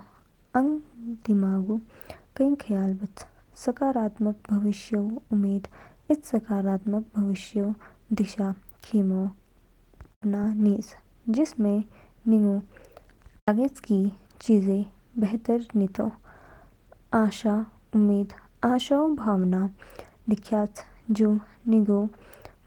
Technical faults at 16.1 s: none

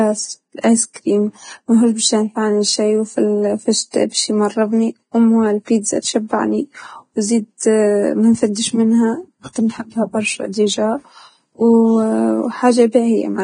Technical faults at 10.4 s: Vorbis compression

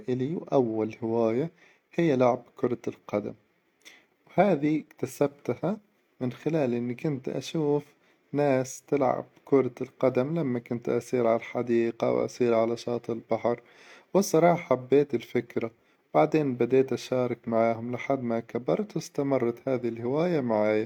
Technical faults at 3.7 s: none

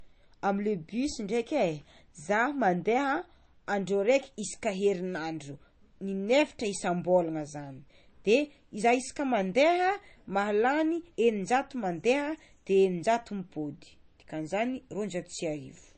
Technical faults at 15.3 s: MP3 compression

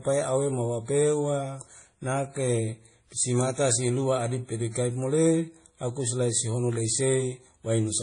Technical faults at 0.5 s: transcoding between lossy codecs

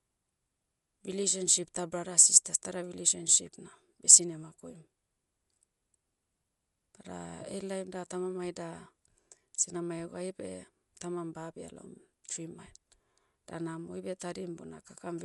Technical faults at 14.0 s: Dolby Digital compression

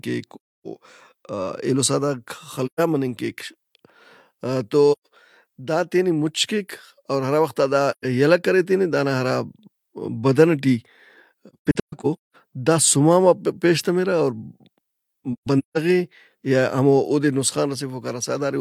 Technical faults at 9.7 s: none

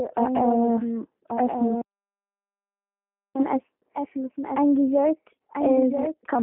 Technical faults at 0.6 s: doubled audio track; G.729 codec

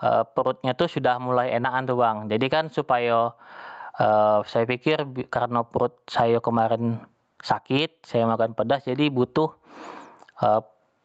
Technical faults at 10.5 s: gain pumping

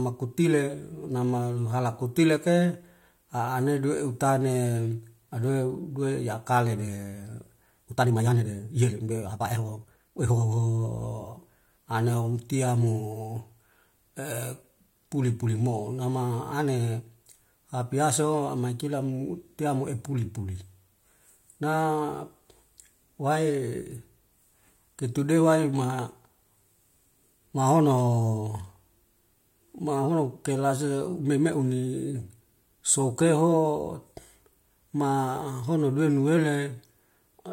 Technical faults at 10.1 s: time-stretched section

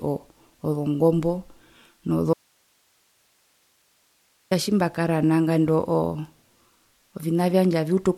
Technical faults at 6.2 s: none

